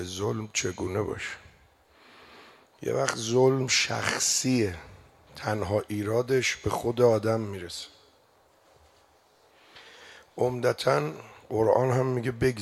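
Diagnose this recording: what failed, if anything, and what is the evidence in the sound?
Nothing in the signal chain failed; no stage leaves any audible fault anywhere in the recording.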